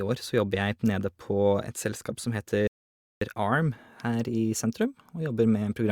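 Speech that halts abruptly at 2.67 s, drops to silence, and picks up at 3.21 s exactly where it broke off, with nothing skipped. This is a rebuffering stall: the player exhausted its downloaded audio and waited for more, adding roughly 0.54 s of dead air.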